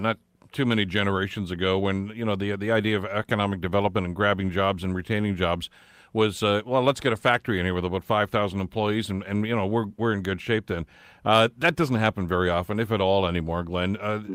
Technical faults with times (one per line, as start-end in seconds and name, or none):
none